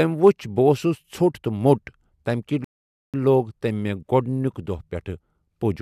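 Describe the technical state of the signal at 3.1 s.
At 3.1 s the speech is inside a rebuffering stall that runs from 2.64 to 3.14 s. The player drained its buffer and went silent for about 0.49 s while waiting for more data, then resumed exactly where it stopped, with nothing lost but time added.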